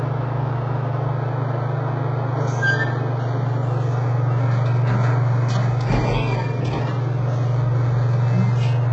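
Throughout the clip the audio carries heavy HE-AAC compression damage, likely from a very low-bitrate encode, around 8 kbps. Nothing sounds above 7.9 kHz, and the treble below that is rebuilt from copied lower bands, so its harmonics misalign and sound gritty and metallic.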